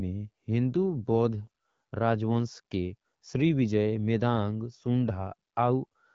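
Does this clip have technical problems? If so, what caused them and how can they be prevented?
No, nothing in this speech recording stood out as a technical problem on listening, so there is nothing to trace to a cause or to prevent.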